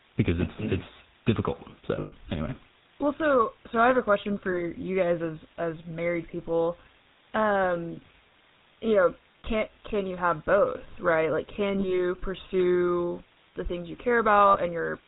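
Across the whole clip the speech carries the plainly audible roughness of the GSM full-rate codec. Nothing is passed above 4 kHz, and the voice has a buzzy, gravelly texture because the coder rebuilds it from a vocal-tract filter driven by a sparse, regularly spaced pulse train. That fits the 13 kbps full-rate coder. Unlike plain band-limiting, the damage here is a grainy rasp inside the band, not only a dulled top end.

The first lost GSM frames come at 1.96 to 2.13 s, just after "because it's it's difficult". About 140 ms goes missing, scattered over 160 ms, with the longest unbroken stretch roughly a tenth of a second. Shorter losses follow at 4.52 s (20 ms), 9.40 s (40 ms), 11.80 s (40 ms, just before "pursue the things you") and 14.48 s (60 ms, just after "pursue the things you"). Each time the decoder repeats the last good frame's settings, so the sound hangs as a brief rough, metallic ring. 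A plain gap with no concealment would leave silence or a click instead.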